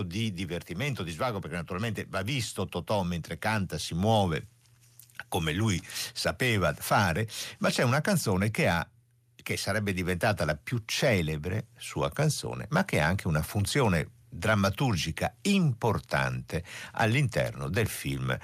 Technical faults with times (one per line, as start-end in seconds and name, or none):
0.05-0.74 automatic gain falling